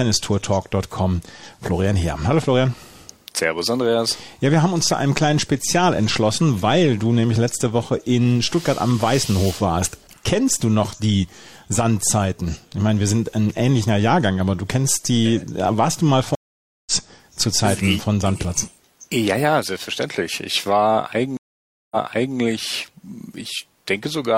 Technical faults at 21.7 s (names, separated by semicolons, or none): stream reconnect